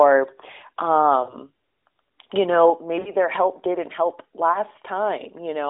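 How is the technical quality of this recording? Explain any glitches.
Three short dropouts break up the speech, each a brief smeared, fading stretch. They are lost AMR speech frames, at 1.24 to 1.34 s, 3.00 to 3.12 s and 4.52 to 4.59 s. The gaps span about 40, 60 and 20 ms, which fits two, three and one missing 20 ms frames. For each lost frame, the narrowband AMR decoder repeats the last good pitch and vocal-tract settings at lowering gain, so the sound stretches and dips before the voice returns, weak or rough for a moment.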